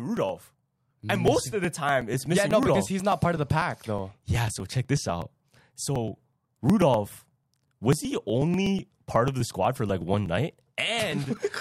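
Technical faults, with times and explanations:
0.17–11.49 s, periodic USB or driver dropouts: a small slice of the speech, on the order of 2 ms, goes missing every 0.123 s, about eight times per second and around a hundred times in all. The missing audio is skipped rather than replaced with silence, so the waveform jumps abruptly at each gap. Each discontinuity is heard as a tick. The ticks sound only while speech is present, and their even spacing points to a background task periodically stalling the audio path.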